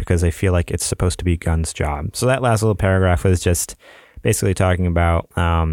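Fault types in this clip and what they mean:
Nothing to list here: I didn't hear any technical faults anywhere in this short bit of speech.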